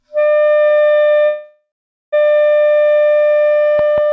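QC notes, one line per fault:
1.26–2.14 s, call audio freeze: the sound stalls into a fading buzz or hiss that sinks to silence for roughly the last 0.43 s, then picks up right where it stopped, so nothing's lost but everything after runs about 0.87 s late. Likely packets held up and the jitter buffer running dry.
3.79–4.12 s, train of clicks: a steady ticking at about 5.3 clicks per second runs out to the end, each pop much the same and peaking about 5 dB above the sound. Likely nearby interference or a faulty connection or power supply.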